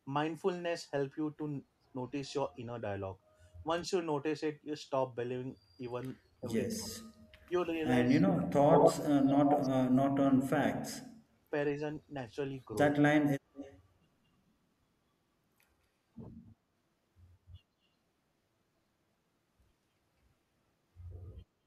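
A speech recording carries two linked hands-free call faults. Speech suppressed in double talk hits 6.41–6.94 s, 8.07–10.94 s and 12.91–13.03 s. The voice dips by up to about 30 dB, 40 dB and 25 dB, for roughly a fifth of a second, about two seconds, and a tenth of a second in total. The likely cause is an echo canceller that, with both sides talking, ducked the near talker along with the echo. On a spectrogram these show as dark vertical gaps and thinned upper harmonics, and on the waveform as sudden pinched-in envelope sections. Echo leak appears at 7.70–7.74 s, 8.41–9.62 s and 13.54–13.79 s. There, a copy of the voice returns 206 ms, 121 ms and 207 ms late, at about 30 dB below the speech, at roughly equal level, and about 20 dB below. It likely comes from loudspeaker sound that the far end's canceller failed to remove. A spectrogram shows a duplicate of the harmonic striations shifted right by that delay, strongest and most obvious in the long 8.41 s stretch.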